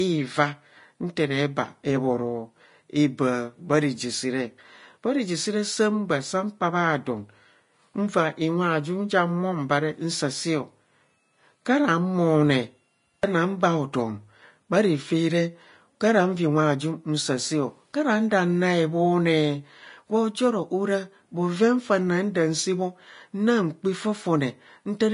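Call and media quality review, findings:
Vorbis compression, throughout: plainly audible codec damage, grainy hiss in the treble, nothing above 10.5 kHz. Likely a low-bitrate encode, around 30 kbps, with the upper residue quantised into noise.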